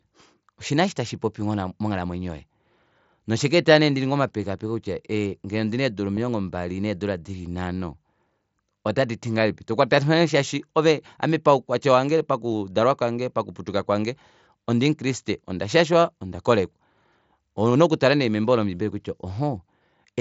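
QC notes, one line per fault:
6.16, 12.52 and 18.43 s, concealed Bluetooth headset packet loss: three tiny dropouts between headset and phone, about 15 ms at 6.16 and 7.5 ms at each of the other two, which fits one or two lost mSBC frames each time. The receiver patched each gap by repeating the closest-matching stretch of recent waveform, so the single-frame losses at 12.52 and 18.43 are almost invisible in the speech.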